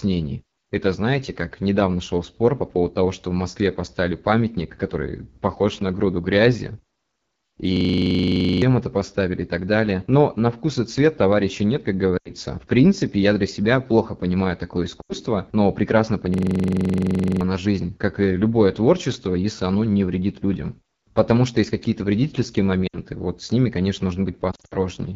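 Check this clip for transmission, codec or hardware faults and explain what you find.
The speech clip shows three faults: low-rate wideband codec damage throughout, two hang loops, and several bursts of lost frames.

The AMR wideband (HD Voice) codec runs through the whole clip. The rough, raspy texture points to one of its lowest rates, around 8.85 kbit/s, where the coarse pulse model starves the speech.

A system hang loop occurs from 7.77 to 8.62 s, ending just before "это поставили и так", and again from 16.34 to 17.41 s. A 42.67 ms slice repeats exactly, giving a mechanical 23.4 Hz stutter, which fits a 2048-sample ring buffer. About a second of speech is lost each time. Unlike frame loss, the repetition is identical, not fading.

Lost AMR speech frames occur at 12.17 to 12.31 s after "цвет товарища нет как", at 15.02 to 15.13 s between "себя плохо понимаю такое" and "но прекрасно", and at 22.87 to 22.96 s. 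Near 24.51 to 24.74 s, short runs are scattered over 200 ms. Each gap is 60 to 140 ms long. The decoder reuses the last good settings with falling gain, so each gap drops to near silence within two frames, not a loop.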